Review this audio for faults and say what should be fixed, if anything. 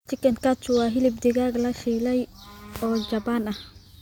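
Nothing stood out on listening to this speech recording, so there is nothing here that needs fixing.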